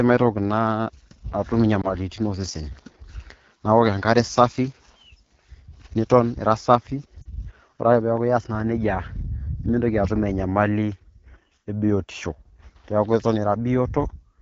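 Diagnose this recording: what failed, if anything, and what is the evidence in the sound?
The codec stage is at fault throughout: the speech carries plainly audible AMR wideband (HD Voice) coding damage, with a rough, raspy texture that fits the low 8.85 kbit/s mode. The encoder models the vocal tract and drives it with sparse pulses, and at this rate too few pulses survive to keep voiced sounds smooth. On a spectrogram, harmonics look smeared and grainy below 6.4 kHz, with a flat, noise-like band filling 6.4 to 7 kHz.

The network stage shows lost AMR speech frames at 1.81 to 1.93 s and 7.22 to 7.30 s. Radio errors corrupted frames, and the decoder concealed them by repeating the last good pitch and vocal tract settings at falling gain. The first event sounds like a brief dip, consistent with one 20 ms frame. The second is a slightly longer drop toward near silence, pointing to about 40 ms lost. 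On a waveform, each appears as a short amplitude sag followed by a weak or rough recovery.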